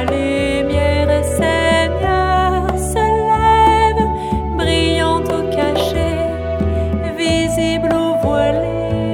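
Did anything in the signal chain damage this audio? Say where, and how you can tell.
No, nothing in the signal chain audibly damaged this audio, and every stage from capture to playback appears to have passed the signal on intact.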